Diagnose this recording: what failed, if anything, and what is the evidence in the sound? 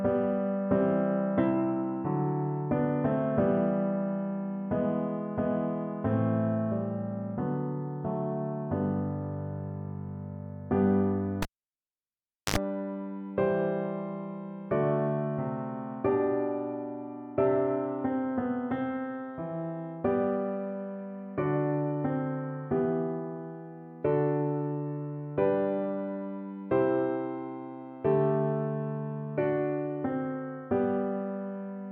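A cable pulled and plugged in, in the analogue wiring: a pop at 11.42 s, about 1.09 s of near silence, then 68 ms of 50 Hz mains buzz as the plug tip makes contact first, and a second pop at 12.56 s. The buzz-and-pop pair sets it apart from a digital dropout.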